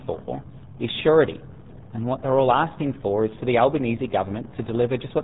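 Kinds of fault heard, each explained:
RealAudio 14.4 codec: the speech has gone through a dial-up era speech coder, which fits an 8 kbit/s stream, and the heavy coding damage leaves it muffled and gargly. A spectrogram shows a hard ceiling at 3.8 kHz with smeared, blocky harmonics beneath.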